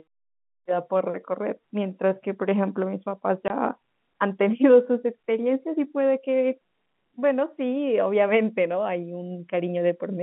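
At 3.48 to 3.50 s the speech drops out for 20 ms, a single case of packet loss filled with silence, which fits one lost 20 ms packet. The receiver inserted digital silence, so the gap has hard edges against the narrowband telephone-coded speech.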